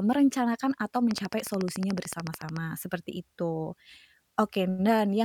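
From 1.11 s to 2.58 s a train of clicks runs over the speech: roughly twenty near-identical pulses at a regular 13.8 per second, peaking about 10 dB above the signal. This is likely electrical interference or a faulty connection or power supply, heard as steady ticking.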